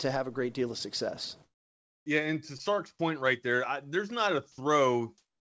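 A speech clip with comfort noise in place of the background. After "great deal of success", 1.43–2.06 s turns steady and featureless. So does 5.18 s to the end. Likely discontinuous transmission.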